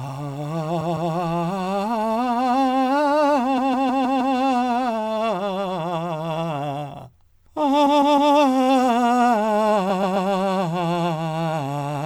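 The music stutters four times with repeated frames, where a short run of compressed frames was delivered more than once and the decoder replayed it. From 0.80 to 1.11 s a 157 ms block repeats twice more. From 3.57 to 4.35 s it repeats five more times. From 7.85 to 8.32 s it repeats three more times. From 9.89 to 10.28 s a 131 ms block repeats three more times. Each block length fits a run of five or six codec frames, and each stutter lengthens the audio by the replayed time.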